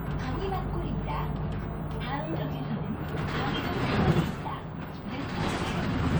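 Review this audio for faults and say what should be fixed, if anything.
Nothing here needs fixing; I listened closely and didn't hear any faults in these sounds.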